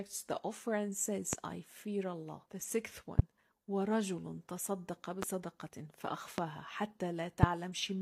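A loud pop hits at 1.33–1.36, 3.19–3.22, 5.23–5.25, 6.38–6.41 and 7.43–7.46 s. Each is a single sharp thump about 20 to 25 dB above the sound, which continues underneath, likely from a voltage pulse off a plug, switch or static. Each shows as a tall, narrow waveform spike and a thin, full-height spectrogram line.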